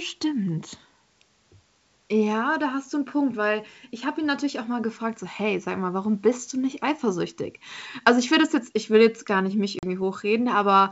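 At 9.79 s, just after "jetzt gar nicht mich", the speech drops into a hard-edged gap of silence lasting about 40 ms, and when it resumes around 9.84 s it comes back slightly distorted, with some roughness before settling. This is packet loss on an ADPCM call, carried here over G.722 at 64 kbit/s. The gap fits a few lost packets filled with silence. The receiving decoder's adaptive predictor and step size then no longer match the sender's, so the first few tens of milliseconds of returning speech are misreconstructed until the two drift back into agreement.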